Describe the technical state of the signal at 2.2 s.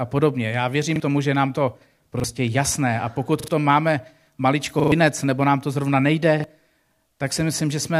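A brief stutter breaks into the speech from 2.2 to 2.24 s: a 40 ms fragment is heard twice in a row, with a hard join where the repeat begins, so the flow catches for an instant. This is a repeated buffer. Fresh audio failed to reach the playback device in time, so it played its last block once more, which fits a 40 ms buffer, and about that much of the original speech never plays.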